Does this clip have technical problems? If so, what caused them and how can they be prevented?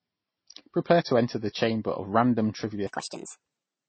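Yes. Transcoding between lossy codecs runs through the whole clip. The lowest cut-off in the chain remains, and artefacts from two different coders are layered together. This is likely from a low-bitrate MP3 re-encoded to Vorbis, with the later coder spending bits on the earlier damage. Encode once from the original source at an adequate bitrate.

A section at the wrong speed runs from 2.87 s to the end. The speech suddenly plays 1.47 times too fast, sounding hurried and pitched up by about seven semitones. The likely cause is a player or editor fitting that part to the wrong clock. Check that sample-rate and clock settings match across the whole edit before export.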